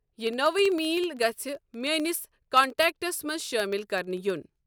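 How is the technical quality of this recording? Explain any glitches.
The recording has one clear technical problem: a steady series of tiny clicks running through almost the whole clip. These are periodic USB or driver dropouts, from about 0.08 s to 4.56 s, repeating every 64 ms (roughly 15 per second), around seventy in all. Each time, a background task stalls the audio path and a tiny fraction of a millisecond of speech is replaced by silence. The result is a rhythmic ticking that is audible only while there is sound. Unlike random digital clicks or crackle, the ticks are evenly spaced.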